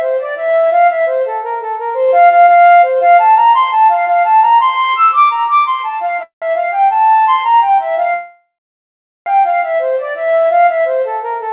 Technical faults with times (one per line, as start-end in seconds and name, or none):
6.23-6.45 call audio freeze
8.14-9.29 call audio freeze